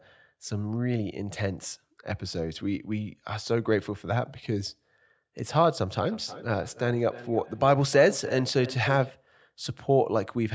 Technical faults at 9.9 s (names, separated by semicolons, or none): none